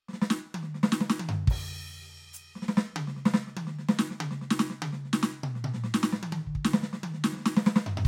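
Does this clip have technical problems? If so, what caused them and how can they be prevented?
No, this music clip has no technical problems, so there is nothing to prevent.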